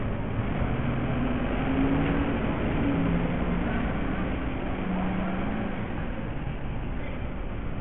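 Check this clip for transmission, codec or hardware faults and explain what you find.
One fault runs throughout. Bluetooth SBC compression is the likely cause: heavy grit, flickering treble, nothing above 16.8 kHz, and coarse sub-band quantisation that fits a starved bit pool near 48 kbps.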